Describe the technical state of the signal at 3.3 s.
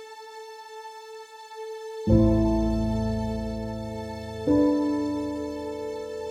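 At 3.3 s the music plays through intact, with no audible dropout, click, distortion or other technical fault at that moment.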